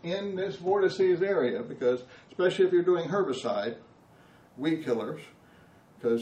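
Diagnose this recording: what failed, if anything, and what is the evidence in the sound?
Adaptive stream starting at a low bitrate, 0.0 to 4.0 s, playback stage: nothing above 8.4 kHz, fitting 32 kbit/s MP3, then a gapless switch fitting 128 kbit/s.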